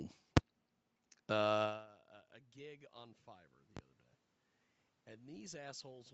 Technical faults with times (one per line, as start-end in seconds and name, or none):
5.08-6.14 automatic gain rising